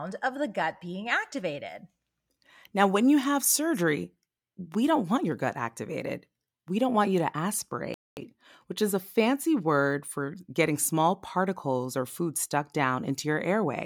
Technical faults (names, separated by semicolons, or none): playback stall